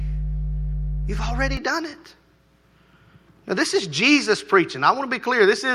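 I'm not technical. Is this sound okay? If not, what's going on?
No, there's a problem at the very start. From 0 to about 1.57 seconds there's mains hum, a steady low drone at 50 Hz, fairly loud, nearly competing with the speech. It stops just before "done it". Hum like this comes from the power supply leaking into the recording, through a ground loop between connected equipment or a transformer sitting close to a cable. After that point the drone is gone.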